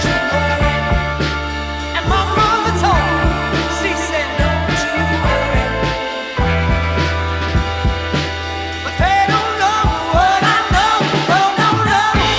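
No technical faults are audible.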